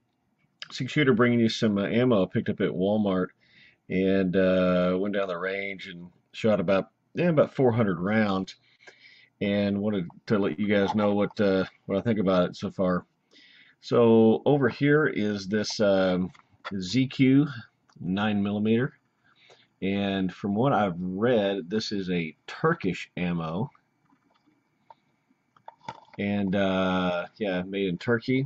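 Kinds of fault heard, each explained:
Scattered short gaps: Between 7.75 and 8.82 s, about five small holes open where packets went missing or arrived too late to play. The receiver covers each one by carrying the preceding sound forward, so nothing drops out, but roughly 70 ms in total is filled this way, with the longest patch around 30 ms. What comes through is mostly clear, with brief ticks and smears at the gaps.
Jitter buffer slow-down: At 9.65 to 10.24 s and again at 11.95 to 12.32 s, the receiver tops up a thin playout reserve by repeating tiny slices of the waveform, one pitch period or a sliver of pause at a time. The pitch holds steady while the timing drags. The first stretch adds 48 ms and plays at 93% speed, and the second adds 38 ms at 92%, so sounds are audibly drawn out.
Short stall from a late packet: At 10.52 to 10.61 s a packet fails to show up when due, leaving the jitter buffer empty. 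Rather than go silent, the receiver prolongs the last sound for 53 ms until the packet lands, then resumes exactly where it paused, so nothing is skipped. The result is a single held moment that lingers a touch too long, and the overall delay grows by 53 ms.
Jitter buffer speed-up: From 14.59 to 15.96 s the buffer is holding more audio than it wants, so the receiver trims it back by cutting out short pieces of one or a few pitch periods repeatedly. Pitch is preserved but the pace rises to 109%, and roughly 150 ms vanishes across the stretch. The sound feels rushed and slightly clipped in its rhythm as the excess delay is worked off.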